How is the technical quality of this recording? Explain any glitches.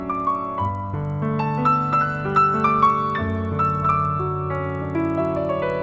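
The quality is impaired by one fault. Throughout, a resampler restarted on every block leaves an error at each 50 ms block edge, producing a 20 Hz tick-buzz under the sound, consistent with 24 kHz to 16 kHz conversion.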